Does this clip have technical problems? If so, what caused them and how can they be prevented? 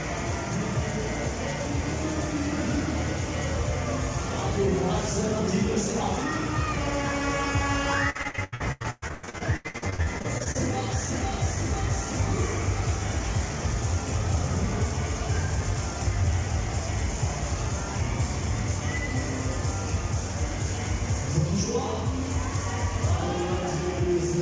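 Yes. From 8.10 to 10.57 s the sound turns choppy, with pieces missing. This is repeated packet loss: gaps of up to 118 ms recur, each filled by extending the preceding sound. A steadier network connection, a larger jitter buffer, or forward error correction would prevent it.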